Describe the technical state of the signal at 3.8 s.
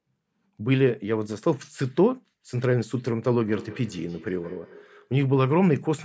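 At 3.8 s there is feedback echo between two devices, from 3.48 to 5.11 s: a second device replays the sound roughly every 150 ms, reaching about −21 dB. Waveform and spectrogram show fainter, smeared copies trailing each onset.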